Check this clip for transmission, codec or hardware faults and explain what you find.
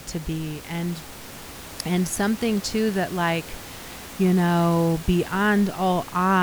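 The speech signal arrives intact, with the room's own background noise sitting about 17 dB below the speech as part of the recording rather than anything added along the way.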